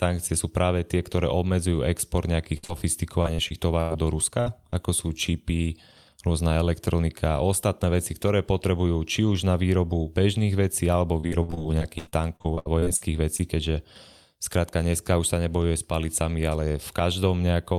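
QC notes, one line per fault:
2.57–2.65 s, burst of packet loss, right after "tie ktoré obmedzujú export": about 60 ms went missing. The receiver stretched the last sound and let it fade, then jumped ahead.
2.65–2.70 s, short concealed packet loss: about 40 ms arrived too late. The decoder extrapolated the preceding sound and blended back, leaving a brief smear.
3.22–3.92 s, repeated packet loss (robotic sound): four gaps, the longest 97 ms. Each was patched by repeating the last sound, so this stretch turns choppy.
4.40–4.48 s, burst of packet loss: about 60 ms lost. The held, fading continuation is audible before the audio resumes with material skipped.
4.70–4.74 s, short concealed packet loss: about 20 ms missing. The concealment continued the prior sound and crossfaded back, leaving a small wobble.
11.20–13.41 s, repeated packet loss (robotic sound), after "výrobu bežných vecí alebo": sixteen gaps, up to 89 ms each, about 540 ms lost in total. 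Constant patching leaves a choppy, broken texture.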